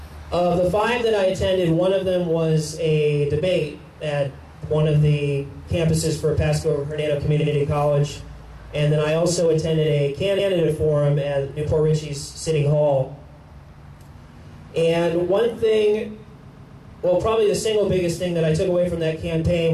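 Repeated frames hit three times. At 7.41 s a 70 ms block plays twice, at 10.38 s a 139 ms block does the same, and from 16.47 to 16.88 s a 139 ms block repeats three extra times. The decoder replays duplicated chunks as stutters, lengthening the audio.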